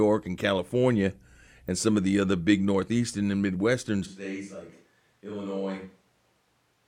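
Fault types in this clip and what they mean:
corrupt frame decoded: Damaged compressed data was played anyway. At 1.68 s, just before "and some of the", a short noisy blip peaks around -25 dBFS.
switch to a distant microphone: From 4.07 s, after "big northeastern and midwestern", the speech turns hollow and roomy. It drops about 10 dB, likely from a farther microphone.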